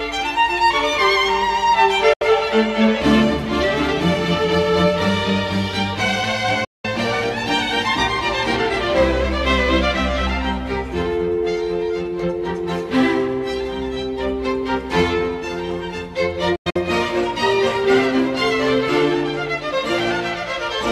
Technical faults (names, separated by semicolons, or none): digital broadcast dropout